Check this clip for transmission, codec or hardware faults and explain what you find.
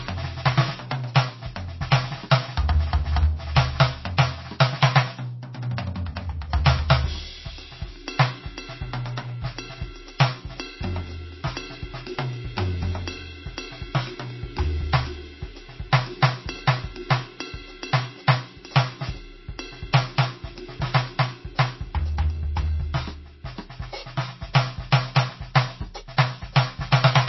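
One fault is present, and it runs through the whole music clip. It is MP3 compression damage, plainly audible. Nothing is heard above 5.8 kHz, which fits a very low bitrate around 24 kbps. Short of bits, the encoder likely cut the treble at that fixed point and dropped weak frequency lines. Those lines flicker in and out between frames, so the music sounds dull, watery and swirly, with smeared attacks.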